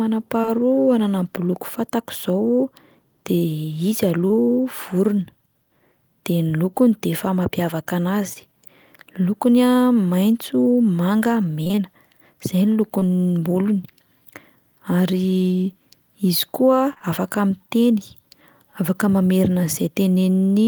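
Short concealed packet loss at 0.41 and 0.45 s (back to back), 4.27, 8.33, 12.99, 16.93 and 16.98 s. About 20 ms of speech arrived too late each time, and the decoder bridged it by extending the preceding sound, leaving brief smears or wobbles. Repeated packet loss (robotic sound) from 11.63 to 11.79 s: four successive gaps, roughly half that stretch patched, give a choppy texture with fragments missing.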